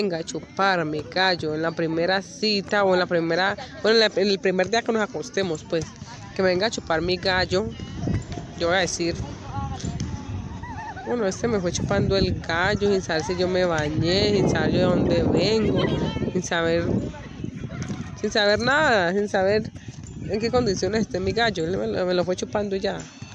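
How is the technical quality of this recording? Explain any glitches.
Nothing stood out as a technical problem on listening, and there are no glitches to explain.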